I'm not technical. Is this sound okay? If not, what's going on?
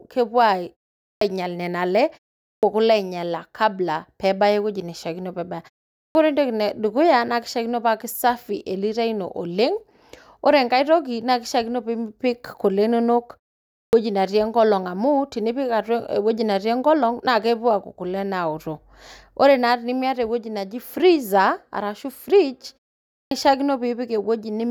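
No. The playback device keeps nodding off whenever the speech pauses, and each time it needs a moment to wake up again. That gives a clipped start after a pause: about 0.15 to 0.17 seconds of speech goes missing right after short gaps of under half a second, so words jump in abruptly without their opening sounds. You can hear it at 1.05, 2.46, 6.0, 13.77 and 23.16 seconds.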